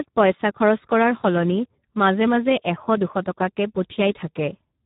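Speech with Speex codec damage throughout. It sounds hoarse and noisy, which fits a low bitrate near 8 kbps. Nothing is heard above 3.8 kHz.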